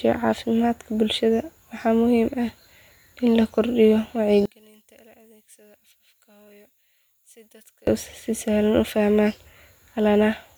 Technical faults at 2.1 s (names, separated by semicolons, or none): none